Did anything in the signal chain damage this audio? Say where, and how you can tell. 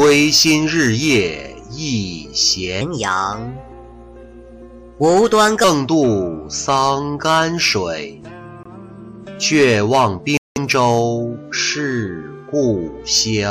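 Yes, two kinds of damage can be heard.

From 2.81 s to 5.64 s there is a section at the wrong speed. The sound runs 1.2 times too fast and sits about three semitones high, then snaps back at 5.64 s. The likely cause is the playback or editing stage running that stretch against the wrong clock. What sets it apart from a pitch-shifting effect is that tempo and pitch rise together, so the passage is both hurried and raised rather than merely higher.

Two Bluetooth stalls occur at the playback link. At 8.63 to 8.67 s the sound drops to silence for about 23 ms, and at 10.37 to 10.58 s a longer gap of about 188 ms opens. Both are clean silences after which the sound picks up again, which points to a wireless buffer running dry, likely while interference held packets up. Codec dropouts would instead smear, warble or repeat fragments rather than stop cleanly.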